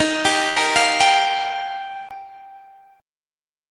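From the start to 2.11 s the input was likely switched to a poorer device: the sound is dull, has nothing above 10.5 kHz, runs about 5 dB quieter with faint added background noise, then clears after a 20 ms silence. A burst of packet loss from 0.49 to 0.58 s makes the receiver stretch the last sound for 66 ms while fading it, then resume with 60 ms missing.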